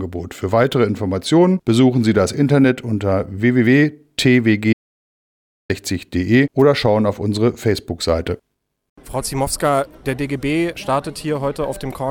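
At 4.73 s the audio cuts to complete silence and resumes at 5.70 s, an audio dropout to silence of about 0.96 s, likely from lost input. Unlike a noise gate or fade, the gap holds plain silence without room tone, and both edges are abrupt.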